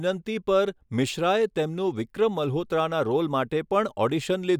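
Nothing technical goes wrong anywhere in this bit of speech, so there's nothing to flag.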